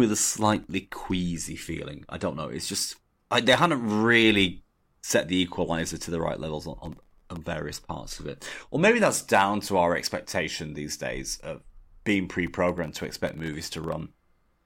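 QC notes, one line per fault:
0.46–0.71 s, 6.86–7.37 s and 12.69–14.00 s: processor overload crackle. Each burst is a rapid string of tiny dropouts to silence with hard edges, heard as gritty crackle over the speech. The gaps are under a millisecond each, which fits very small audio buffers missing their deadlines. The bursts grow from a handful of misses in the first to a few dozen in the second and roughly fifty in the last.
12.47 s: electrical switching spike. A sharp snap sits on top of the speech for under 10 ms, shortly before the final crackle burst. The abrupt, isolated transient points to a likely arc from a nearby switch, motor or static discharge coupling into the audio line.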